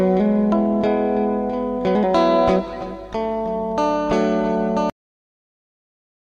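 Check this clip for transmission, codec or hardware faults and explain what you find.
One fault, a cut-off end. At 4.90 s the final buffers were never written or played back, so the recording simply stops there. The sound is chopped off mid-event and falls straight to digital silence, with no natural decay, for the remaining 1.4 s.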